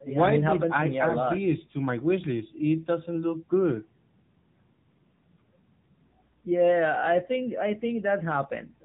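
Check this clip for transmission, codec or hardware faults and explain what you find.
One codec fault runs through the whole speech clip. It is the AMR narrowband mobile codec, AMR-NB.

It is present from start to finish. The codec works at 8 kHz sampling. It models the vocal tract and drives that model with a few pulses per short sub-frame. So nothing above 4 kHz survives. The damage is plainly audible. Speech sounds muffled, buzzy and synthetic. That fits one of the codec's lower modes, near 8 kbps. The call's microphone processing trims only the deepest bass, which is normal.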